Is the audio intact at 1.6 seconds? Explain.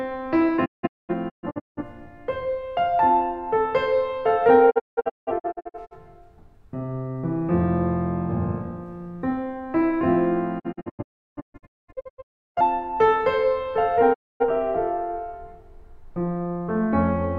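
No. A digital broadcast dropout spans 0.64 to 1.83 s. The receiver lost valid frames and muted until good ones returned, so the music breaks into several short holes with 20 ms fades, about 0.73 s lost in total, the longest 213 ms.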